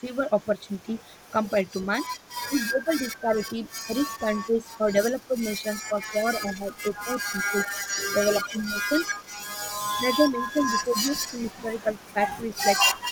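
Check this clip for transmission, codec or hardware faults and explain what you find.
Two echo-canceller problems show up here, both on the speech path.

Echo leak at 0.15–6.1 s, 6.72–9.48 s, 10.31–10.51 s and 11.28–13.11 s: a delayed copy trails the talker by roughly 300 ms. It's faint, about 30–35 dB down, except around 6.7–9.5 s, where it jumps to about 10 dB below. That's likely a far-end loudspeaker whose canceller lets residue through.

Speech suppressed in double talk across 2.45–8.92 s and 9.99–12.55 s: the talker dips while the other side is active, by up to about 15 dB and then 10 dB, for roughly four seconds in all. The canceller is likely clamping both voices.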